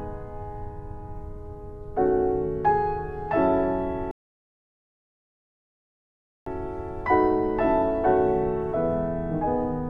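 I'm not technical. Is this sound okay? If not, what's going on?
No. From 4.11 to 6.46 s there is a rebuffering stall: playback ran out of downloaded audio and paused for about 2.35 seconds. Unlike a dropout, nothing is skipped; the sound picks up exactly where it stopped, so only time is added.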